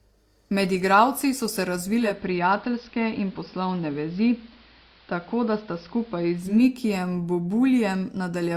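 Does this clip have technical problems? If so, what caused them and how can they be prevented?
Yes: right after "igralci so se", from 1.95 to 6.65 s, digital radio blending to analogue AM adds faint hiss through 0.3 s cross-fades at steady level, unlike an abrupt codec bandwidth drop. Better reception or disabling blend, with time-aligned digital and analogue feeds, prevents it.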